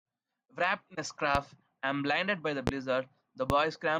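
Three loud pops land on the speech, at 1.35–1.39 s, 2.67–2.71 s and 3.50–3.54 s, each a single sharp thump about 15 to 20 dB above the signal. It's likely a voltage spike from a switch, plug or static, while the speech carries on underneath.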